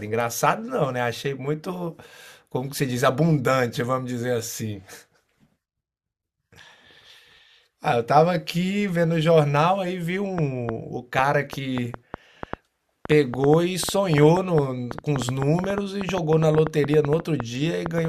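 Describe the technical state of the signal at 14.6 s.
At 14.6 s the speech sits inside a train of clicks running from 10.38 s to 18.06 s: about 6.1 clicks per second at uneven spacing, some fifty in all, peaking around 15 dB above the speech. Likely interference from nearby equipment or a faulty connection or power supply injecting similar-shaped pulses, heard as popping that persists through pauses. A waveform shows sharp spikes jutting above the speech envelope; a spectrogram shows thin, irregularly spaced vertical broadband lines.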